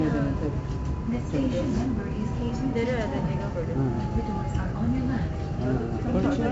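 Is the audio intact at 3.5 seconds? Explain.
No. At 3.5 seconds, as everywhere in the clip, 4-bit ADPCM compression is present. Each sample is coded as a coarse 4-bit step from a predicted value, with the step size adapting on the fly. The resulting error is noise that rises and falls with the sound, heard here as heavy gritty hiss on louder moments and roughened attacks. Nothing survives above 7.7 kHz, which points to a low sample rate and fits a 64 kbps stream.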